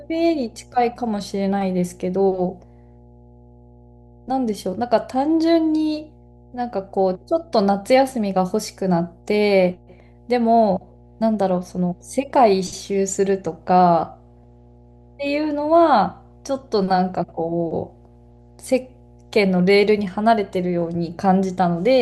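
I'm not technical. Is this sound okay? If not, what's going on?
No. There is mains hum under the speech for the whole recording: a steady, low 60 Hz drone with a few low overtones. Electricity from the power line is leaking into the audio, probably through a ground loop or a nearby transformer. It sits quietly but never stops.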